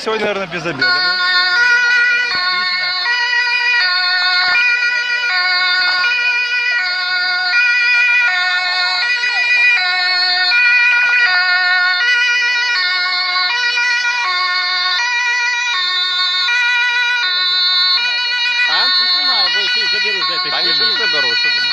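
Throughout, the sound is dull and granular with a gurgling edge, most likely MP2 compression at a rate near 80 kbps starving the upper sub-bands of bits. DAB burbling, unlike that steady dullness, comes in bursts at 4.13–4.61, 5.81–6.00, 9.18–9.35, 10.91–11.38 and 19.10–20.09 s. Slipped bit errors put short blips of noise into single sub-bands.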